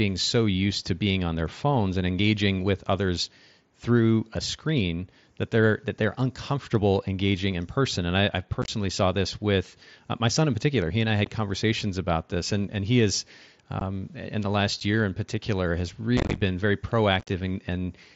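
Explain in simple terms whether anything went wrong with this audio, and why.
Yes, something went wrong. The link between the Bluetooth headset and the phone dropped some short chunks of speech, and nothing filled the gaps. This is unconcealed Bluetooth headset packet loss. You hear it as brief holes with sharp edges. Single dropouts come at 11.25–11.27 s, 13.80 s and 14.80 s. Rougher clusters come at 8.62–8.68 s, 16.17–16.42 s and 17.20–17.29 s, where the speech sounds broken up or crackly.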